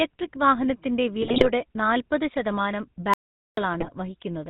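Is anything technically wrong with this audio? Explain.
Yes, there are three kinds of fault in this speech.

GSM full-rate codec, throughout: the voice is rebuilt from a vocal-tract model driven by sparse, evenly spaced pulses, which fits a 13 kbps GSM full-rate channel. Nothing above 4 kHz survives, leaving the speech plainly buzzy and gravelly.

GSM bit errors, 1.23 to 1.50 s and 3.80 to 3.89 s: corrupted bits reached the decoder, so filter, pitch and gain values went wrong frame by frame. The spectrum warps and the level jumps, giving bursts of squawking and gargling.

Audio dropout to silence, 3.14 to 3.57 s: the sound cuts off for about 0.44 s into silence, with no room tone. The likely cause is lost input while the recorder kept writing silence, so whatever occurred then is gone.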